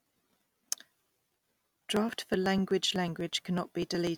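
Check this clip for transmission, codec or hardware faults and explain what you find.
The clip has one hardware fault. Periodic USB or driver dropouts occur from 0.11 s to 4.07 s, repeating every 0.124 s, around thirty times in all. A background task stalls the USB bus or audio driver at that fixed interval, and roughly a millisecond of the speech is skipped outright each time, so the waveform jumps ahead. Each splice is heard as a regular tick, about eight per second, audible whenever speech is present.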